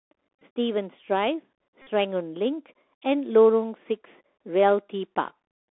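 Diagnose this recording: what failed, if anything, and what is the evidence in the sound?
Bluetooth CVSD headset codec, at the codec stage, throughout: the audio is confined to roughly 300 Hz to 3.5 kHz, with a granular hiss under it, scratchy s sounds and gritty distortion on loud bright passages. That grain and step overload separate it from a plain narrowband filter.

Bluetooth headset packet repeated, on the wireless link: a brief buzz at 0.41 s, then a buzz near 267 Hz from 1.82 to 1.87 s, pointing to roughly 13 lost packets. Re-decoding the previous 3.75 ms packet gives a periodic buzz rather than the silent gap of a dropout.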